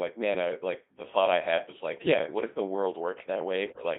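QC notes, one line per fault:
Throughout: Codec 2 vocoder. The speech comes across robotic and buzzy with a heavily synthetic, thin tone, confined to roughly 250 Hz to 3.6 kHz. At 2.4 kbit/s the decoder never receives the waveform, only pitch, voicing, energy and a coarse spectral envelope for each frame, and it rebuilds the voice from a bank of sine waves. The natural texture of the voice is lost, and the damage here is heavy.
1.97 to 2.14 s: bit errors on digital voice radio. Just after "thought I had was" and before "what if the world", the voice lurches in pitch and level and breaks into warbling, bleepy gibberish for about 0.17 s. Roughly 3% of bits are corrupted across what sounds like a handful of frames, which fits about six. At this low rate each flipped bit rewrites a whole frame's pitch, loudness, voicing or spectrum.
3.70 to 3.84 s: bit errors on digital voice radio. A shorter burst of about 0.14 s is harsher than the first, with sudden jumps in pitch and tone colour and robotic bleeps in place of speech. 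The error rate here is around 7%, so more of each affected frame's parameters are scrambled. This sounds like about four frames decoded from corrupted data.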